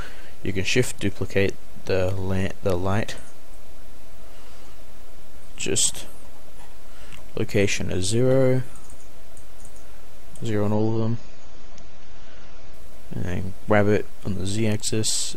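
From 10.73 to 12.73 s codec artefacts abruptly rise without any gap, an adaptive stream at a lower bitrate, consistent with a drop from roughly 96 to 24 kbit/s AAC.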